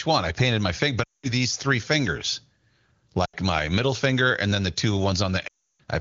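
Speech over AMR-WB, clear at what sounds like a high rate, with three bursts of lost AMR speech frames. At 1.04–1.33 s, after "I painted my finger", the sound drops to near silence before "three fingers". At 3.25–3.35 s a short drop to near silence precedes "my middle finger and". At 5.47–5.80 s, after "and then the two", a longer drop to near silence follows. Each burst comes from frames failing their checksum. The decoder conceals them by repeating the last good pitch and vocal tract settings with falling gain.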